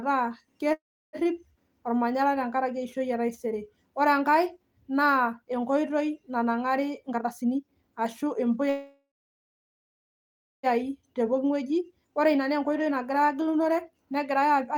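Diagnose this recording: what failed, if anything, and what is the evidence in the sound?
Call audio freeze at 0.73–1.16 s and 8.70–10.66 s, likely from packets stalling on the network and draining the jitter buffer. The last sound decays into silence, about 0.33 s and 1.57 s long, which shows as blank spectrogram columns. Speech resumes intact, arriving about 0.4 s and 1.9 s later.

Jitter buffer speed-up at 7.09–8.62 s and 11.21–14.76 s. With the buffer holding more audio than its target, the receiver cut repeated pitch-period slices, roughly 0.4 s in each stretch. Speech runs 123% and then 110% fast at unchanged pitch, and the waveform's syllables appear compressed in time.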